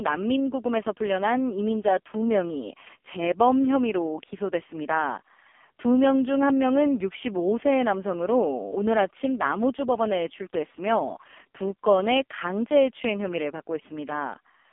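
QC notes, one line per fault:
Throughout: AMR narrowband mobile codec. Speech is band-limited to roughly 250 Hz to 3.4 kHz, with nothing above 3.5 kHz. Heavy buzzy, synthetic colouring suggests the lowest-bitrate mode, around 4.75 kbps.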